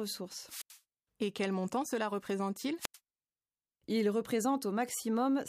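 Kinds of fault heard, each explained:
Wireless microphone squelch dropout: the radio link from an analogue FM microphone weakened until the receiver's squelch cut its output, so the speech is interrupted twice, between 0.45 and 0.79 s and again between 2.78 and 2.98 s. Each time hiss rises as the signal fades, then the output falls to near silence for about 85 ms and about 90 ms respectively before the speech comes back.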